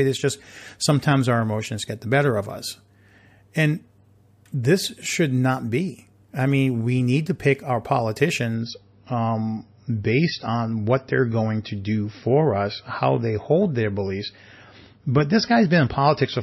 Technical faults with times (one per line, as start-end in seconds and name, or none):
8.55-16.43 adaptive stream at a lower bitrate